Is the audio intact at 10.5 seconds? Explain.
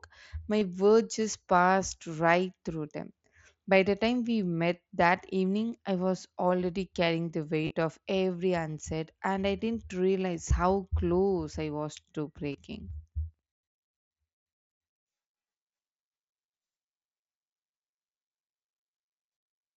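No. At 10.5 s there is a concealed Bluetooth headset packet loss. About 7.5 ms of audio failed to arrive, which fits a single lost packet. The receiver filled the gap by repeating the closest-matching recent stretch of waveform, so the patch is nearly inaudible within the mSBC headset signal.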